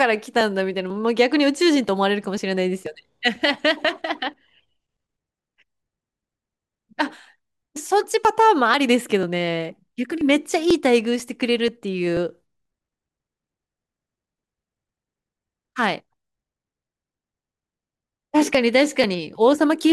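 Periodic USB or driver dropouts run from 0.41 s to 19.53 s, repeating every 0.49 s. Each time, something stalls the audio path and roughly 10 ms of speech is skipped outright. This leaves about forty evenly spaced ticks that sound only while speech is present.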